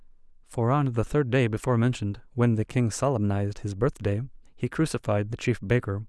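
Speech recording; no technical faults are audible anywhere in the clip.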